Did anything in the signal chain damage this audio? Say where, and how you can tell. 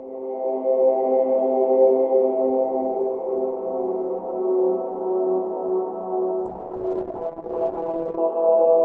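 Yes. A call bitrate drop at the codec stage begins at 6.46 s and continues to the end of the clip at 8.84 s. The top end collapses from a full 20 kHz to a cutoff near 8 kHz, and the sound turns coarse and watery. That fits the call's bandwidth estimate falling and the encoder going from about 48 kbps to 8 kbps. It sits at that floor for roughly 1.7 s and does not recover.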